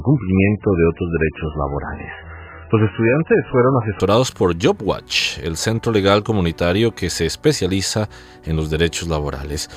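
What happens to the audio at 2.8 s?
At 2.8 s you're still inside the opening stretch, from 0.0 to 4.0 s, where this is an adaptive stream starting at a low bitrate. The player grabbed a cheap version first to get going fast, so nothing comes through above 3 kHz and the codec artefacts are stronger, which points to something around an 8 kbit/s MP3. At 4.0 s it jumps to a much cleaner version, consistent with 128 kbit/s MP3, with no gap.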